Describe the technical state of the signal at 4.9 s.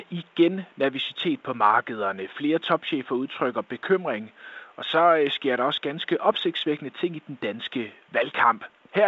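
At 4.9 s the signal is intact, with only faint room noise well below the speech and the clean wideband sound of G.722 telephone coding at 64 kbit/s.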